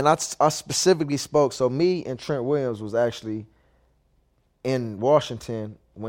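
No technical faults can be heard anywhere in this recording.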